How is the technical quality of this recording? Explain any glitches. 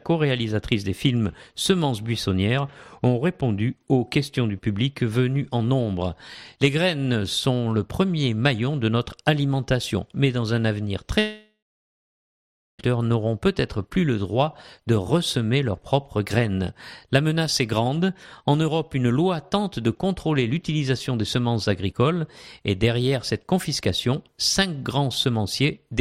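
The recording has one clear glitch, a long network dropout. It runs from 11.19 to 12.81 s. The sound at 11.19 s carries on as a fading buzz for a few tenths of a second. Then about 1.2 s of silence follows. At 12.81 s the audio resumes, but about 1.6 s of material is simply gone. The likely cause is a stall in the network stream. The receiver smeared the last sound to cover the gap, then gave up and went quiet.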